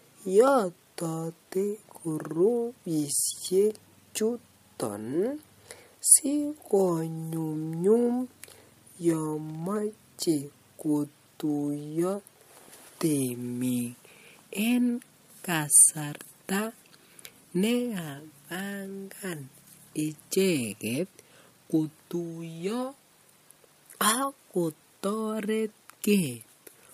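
Speech with no audible faults.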